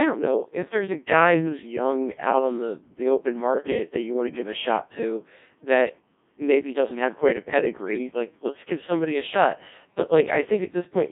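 From start to finish, the speech carries the sound of a Codec 2 vocoder, heavily damaged and consistent with its 1.6 kbit/s mode. Only pitch, voicing, energy and a spectral envelope survive, resynthesised from sine waves within roughly 150 Hz to 3.6 kHz, so it sounds robotic and buzzy.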